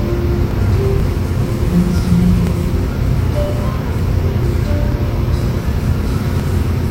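From 0.51 s to 6.40 s there are periodic USB or driver dropouts. About fifteen short gaps occur, one every 0.49 s. Each time, a brief stretch of audio is skipped rather than filled. Around 10 ms goes missing per event. Something is stalling the USB link or audio driver on a fixed cycle. The joins where audio is cut out cause regular ticks. They are heard only while sound is present.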